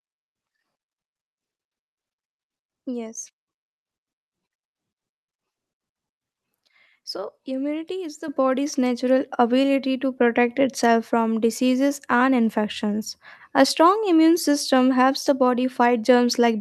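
The call software raised the microphone volume in single steps: at 8.28 s, after "immunity is the", speech and background jump about 8 dB, then about 3 dB more at 9.30 s, after "is the body's natural".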